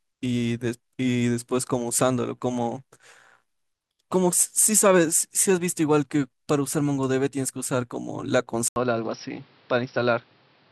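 Input switched to a poorer device at 8.68 s. After an 80 ms silence, the speech loses everything above 5.7 kHz and turns dull and boxy. It drops roughly 5 dB and gains new background noise about 30 dB below it, likely from a different microphone taking over.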